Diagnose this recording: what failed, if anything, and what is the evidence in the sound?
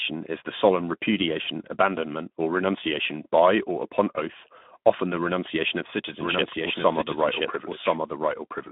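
The codec stage is at fault: this is Speex at a low setting, and it's there for the whole clip. The speech sits in a phone-style band of about 150 Hz to 3.6 kHz, with nothing above 3.8 kHz. The grainy, hoarse texture is plainly audible, which fits a rate around 11 kbps. At that rate the CELP coder has too few bits to model the excitation, so it swaps fine detail for a noisy approximation.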